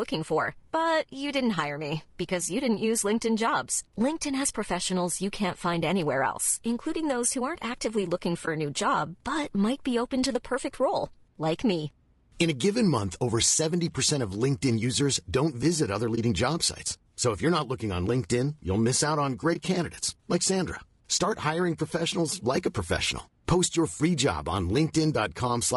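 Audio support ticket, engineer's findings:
Speech coded throughout with a likely low-delay AAC compression (AAC-ELD-type) at a low rate, around 32 kbps: coarse quantization adds noise between harmonics, leaving rough, grainy speech with a thin, synthetic top.

AAC frame loss with muting, 8.45–8.48 s (after "who aren't actively looking"), 16.15–16.18 s (after "users don't visit other"), 19.53–19.56 s (after "you'll miss out on"). One roughly 20 ms frame zeroed each time; window overlap fades it, so there are soft dropouts.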